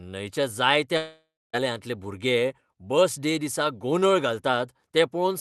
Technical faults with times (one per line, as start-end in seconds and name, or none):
0.97-1.55 long network dropout